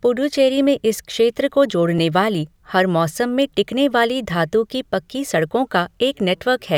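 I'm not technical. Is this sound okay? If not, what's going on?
No. The speech has a regular click about every 1.67 seconds, from 0.32 s to 5.33 s, about four in all. This is most likely clock drift buffer slips. Two devices keep slightly different time, so now and then a tiny chunk of sound gets dropped or repeated.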